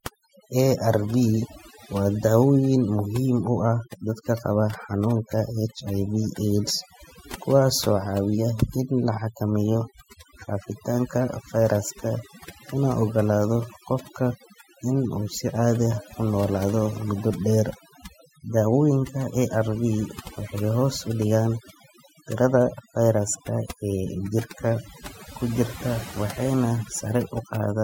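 From start to finish, the speech carries overdone noise removal. A noise reduction stage was pushed too hard on a noisy source. It treats individual frequency bands as noise whenever they sit near its noise estimate, and cuts them deeply or entirely. Quiet parts of the speech fall below that line and vanish too. Between phrases the background drops to near silence, dotted with twinkling specks.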